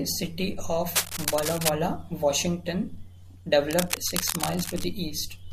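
At 0.95 s, right after "city of", a burst of cable scratch noise runs until 1.70 s, a dense, uneven crackle roughly as loud as the speech itself. A second, somewhat quieter burst follows from 3.70 to 4.84 s. Both sound like scratching or rustling laid over the speech, most likely from a worn cable, connector or control being moved so that its contact resistance fluctuated rapidly.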